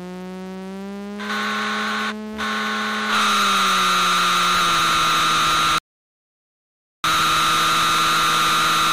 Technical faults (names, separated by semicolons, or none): rebuffering stall